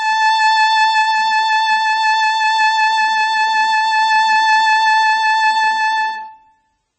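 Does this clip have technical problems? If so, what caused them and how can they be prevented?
Yes. Throughout, the music sounds watery and swirly with smeared attacks and no treble above 8.2 kHz, likely from heavy MP3 compression at a very low bitrate, around 16 kbps. Encode at a higher bitrate or with a more efficient codec.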